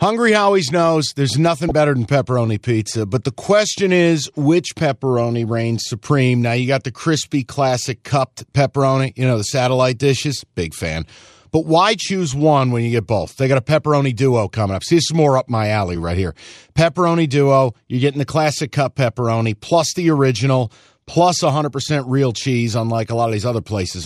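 Speech with a brief burst of burbling from 1.69 to 1.71 s, typical of DAB burbling. Weak reception let bit errors, well under one percent, slip past error correction into the MP2 data, putting short blips of noise into single sub-bands across what sounds like a few frames.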